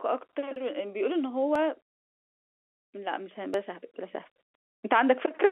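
Audio missing between chunks shows up at 0.56, 1.55 and 3.54 s in this speech clip, each a tiny skip of only a few milliseconds where the sound jumps forward with no gap of silence. The skips land on one-second spacing, which points to a recorder or processor handling the audio in one-second chunks and likely dropping a sliver at each handover before splicing the two sides together, all over a telephone-band G.711 line.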